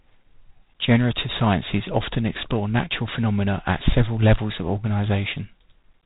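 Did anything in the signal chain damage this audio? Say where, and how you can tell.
Yes. The damage comes from the codec stage: G.726 ADPCM, running through the whole clip. Nothing reaches above 3.8 kHz. A harsh, rasping hiss rides on the speech and rises and falls with its level. That points to about 24 kbit/s, where each sample's predicted difference gets only three bits.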